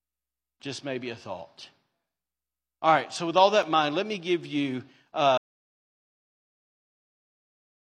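At 3.63 s, between "right so with all" and "in mind let me", a sharp-edged 5 ms hole briefly interrupts the speech. This is a gap between stream segments: mismatched timestamps left a tiny silent space that the player filled.

From 5.38 s, right after "let me give you", the speech cuts off into silence with no room tone, lasting to the end. This audio dropout to silence likely comes from the input being lost while silence kept being written.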